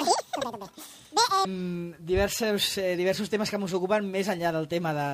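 From the start to about 1.45 s, the sound rushes by at twice normal speed and a full octave (12 semitones) high. This is audio read two samples at a time: each pair of samples was taken as one frame, so playback ran double speed.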